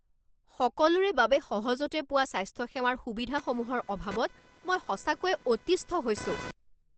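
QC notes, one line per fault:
throughout: Opus compression. Muffled, hoarse speech with a hard ceiling at 8.5 kHz on the spectrogram, likely from Opus's SILK speech mode at a low bitrate, around 16 kbps.
3.38–6.51 s: computer activity noise. A buzz pulsing around 500 Hz, roughly 20 dB below the speech, as computer load disturbs the shared ground. The spectrogram shows evenly spaced vertical striations unrelated to the speech.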